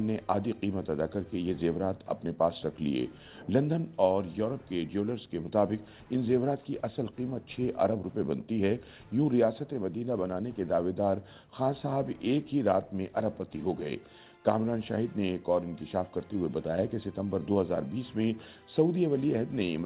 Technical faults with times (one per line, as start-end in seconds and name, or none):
none